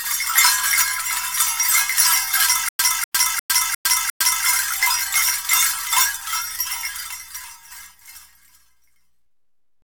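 From 2.69 to 4.45 s the audio stutters with silent gaps: a 246 ms fragment plays five times, each followed by 107 ms of dead silence, repeating every 353 ms. This is likely a stalled player or stream replaying its last fragment at each retry, losing the audio meant for that stretch.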